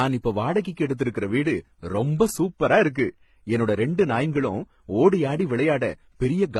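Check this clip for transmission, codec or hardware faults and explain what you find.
One codec fault runs through the whole clip. The speech has likely gone through transcoding between lossy codecs: a very low-rate HE-AAC encode, then further AAC passes. Each re-encode wastes bits on earlier artefacts and adds its own, so smeared, swirly textures stack up, and nothing remains above 18 kHz.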